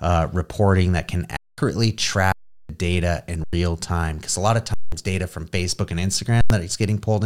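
The output buffer ran dry five times, and each time the converter held its last sample until data returned, an underrun with held sample. The speech freezes onto a flat, silent level at 1.37 s after "uh reporting that can" (0.21 s), 2.32 s (0.37 s), 3.44 s (0.09 s), 4.74 s between "a lot of" and "data from" (0.19 s), and 6.41 s (0.09 s). The gap lengths at 2.32, 3.44, 4.74 and 6.41 s fit blocks of 4096 samples. Live audio was lost during each hold.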